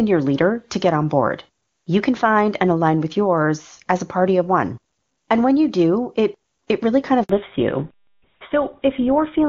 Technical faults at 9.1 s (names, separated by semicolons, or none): fallback to narrowband